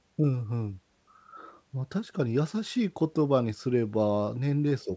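No technical faults are audible.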